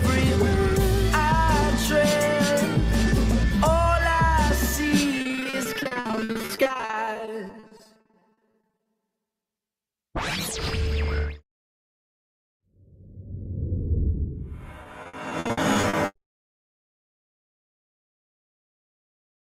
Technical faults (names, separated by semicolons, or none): repeated packet loss (robotic sound)